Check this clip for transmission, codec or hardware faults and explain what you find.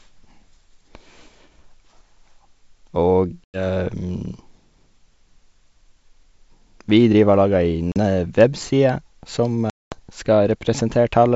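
Packet loss on the ADPCM call occurs three times, at 3.44 to 3.62 s, 7.92 to 7.98 s and 9.70 to 10.00 s. The silent gaps last 100 ms, 40 ms and 220 ms, which points to roughly five, two and ten packets dropped. Silence fills each gap, so the decoder's predictor and step size no longer match the sender's. The speech comes back slightly distorted before it settles. On the waveform, each gap is a flat line with vertical edges. On the spectrogram it is a blank column, followed by briefly smeared energy.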